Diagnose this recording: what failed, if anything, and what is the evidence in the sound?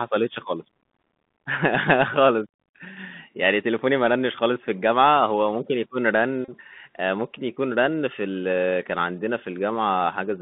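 The failing stage is the codec, specifically a Bluetooth CVSD headset codec, for the whole clip. The speech sits in a narrow band, roughly 150 Hz to 3.5 kHz, with nothing above. The codec damage is plainly audible. S sounds are scratchy, loud bright syllables break up, and a grainy hiss runs under the speech. This fits the 64 kbps one-bit delta scheme, whose adaptive step cannot keep up with fast, loud high-frequency movement.

The second fault is on the wireless link, a Bluetooth headset packet repeated. From 6.45 to 6.50 s a short buzz near 267 Hz replaces the speech. The headset lost about 34 ms of audio, which fits nine consecutive packets. Instead of silence, the chip decoded the last good packet's bits again and again. Each repeat lasts 3.75 ms, and that fixed period produces the steady buzz until good packets resume.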